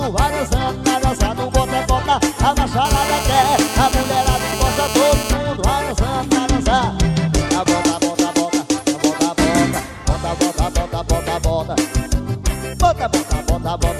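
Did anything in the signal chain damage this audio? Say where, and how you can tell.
Yes, in the analogue stage. From 2.85 s to 5.33 s there's a GSM phone buzz: a hard, raspy tone at about 217 Hz, loaded with harmonics and sitting only about 8 dB below the programme, with no relation to the audio itself. It is nearly steady, which fits a phone on a call. The handset's radio bursts at that rate, and the analogue audio circuit demodulated those pulses into the audio path.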